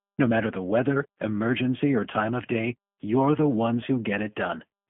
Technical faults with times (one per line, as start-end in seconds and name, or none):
0.00-4.89 G.729 codec